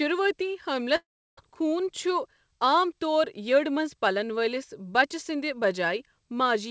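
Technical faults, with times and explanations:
0.96–1.39 s, long network dropout: the speech breaks off, and the receiver stretches the last sound into a fading buzz that decays to near-silence for about 340 ms. Speech resumes with 420 ms lost, likely from packets that never arrived.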